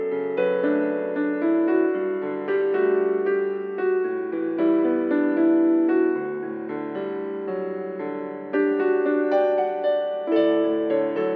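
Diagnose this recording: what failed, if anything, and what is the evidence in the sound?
Nothing failed; no fault can be heard anywhere.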